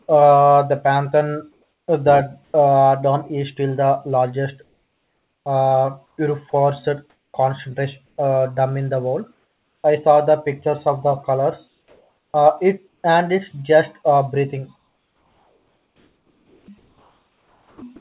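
A speech clip, band-limited to nothing above 4 kHz in a way that fits a G.711 A-law call at 64 kbps, has comfort noise in place of the background during pauses at 1.52–2.54 s, 4.64–6.18 s (after "still the largest"), 7.1–8.18 s, 9.34–9.84 s (after "dome in the world", about 2 dB quieter) and 11.68–13.04 s. The real room tone gives way to smoother synthetic noise, likely from discontinuous transmission. From 14.76 to 17.82 s, after "it's just uh breathing", the sound is chopped by the voice detector. Unlike the clean pause fills, in this stretch quiet sound is cut away, likely from the detector switching repeatedly.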